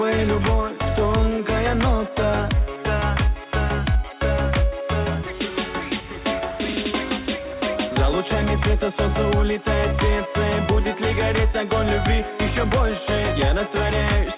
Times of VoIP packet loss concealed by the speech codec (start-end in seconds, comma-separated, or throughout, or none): none